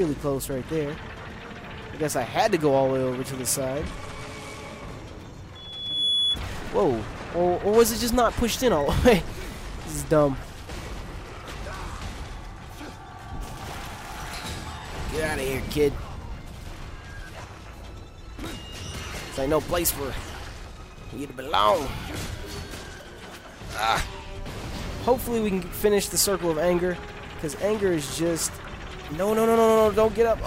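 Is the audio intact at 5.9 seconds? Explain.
No. At 5.9 seconds a loudspeaker feedback squeal is under way, running from 5.55 to 6.40 s. A microphone is hearing the speaker it drives, and at 3.4 kHz the loop gain tops unity, so that one frequency feeds on itself, swelling over roughly half a second to sit about 5 dB above the sound. The gradual build-up sets it apart from an interference whistle or stray tone, which would appear at full level immediately.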